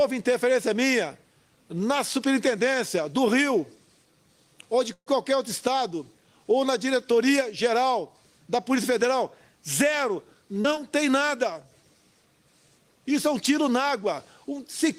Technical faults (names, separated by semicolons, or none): call audio freeze; short concealed packet loss; jitter buffer slow-down